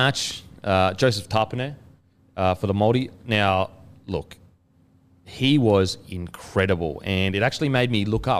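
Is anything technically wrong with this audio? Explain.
Yes: word clock ticks from 0.32 s to 8.39 s, about one a second, around ten sharp clicks. An unlocked digital clock drifting roughly 20 ppm keeps slipping a single sample.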